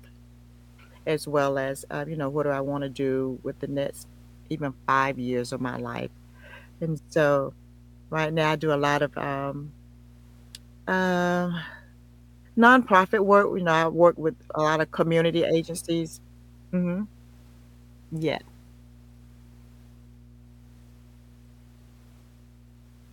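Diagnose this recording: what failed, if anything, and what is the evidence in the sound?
The analogue wiring failed: a ground loop or a nearby transformer is coupling the power line into the signal path before conversion, producing mains hum. A steady low tone at 60 Hz, with some low harmonics, sits under the speech from start to finish, at about 25 dB below the speech level. It doesn't change with the speech, and it stays audible in every pause, which points to a constant electrical source rather than anything in the room.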